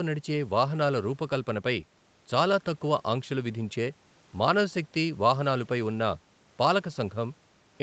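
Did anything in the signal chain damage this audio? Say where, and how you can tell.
No, nothing in the chain damaged this speech: the missing lowest bass is the call microphone processing's normal high-pass, and the lack of content above 8 kHz is simply the band limit of the WebRTC call path, which fits an Opus link running at around 32 kbps.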